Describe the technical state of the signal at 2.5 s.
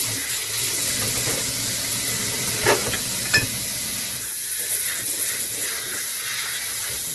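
At 2.5 s, as throughout, the audio is grainy and rough, with tones smeared into noise, likely from heavy Opus compression at a rate near 12 kbps, with band energies refilled by folding and noise. A spectrogram shows a hard ceiling at 12 kHz.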